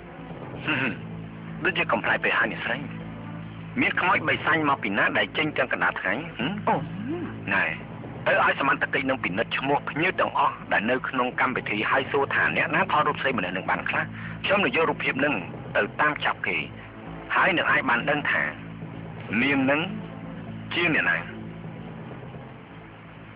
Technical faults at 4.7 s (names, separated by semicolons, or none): none